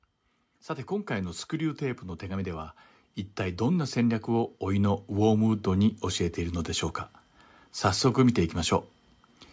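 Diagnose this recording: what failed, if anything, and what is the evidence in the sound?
Automatic gain rising, 0.47 to 2.77 s and 3.36 to 6.96 s, in the call processing stage. Speech and background swell together, by about 5 dB and then about 8 dB. The gain control judged the input too quiet and ramped its gain up gradually, lifting everything equally.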